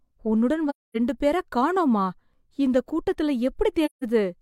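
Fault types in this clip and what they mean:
AAC frame loss with muting: missing AAC frames were decoded as silence, so the speech fades out and back in across overlapping windows, leaving soft-edged gaps of about 0.26 s near 0.69 s and 0.17 s near 3.85 s. The spectrogram shows blank full-band columns, and the waveform tapers to flat.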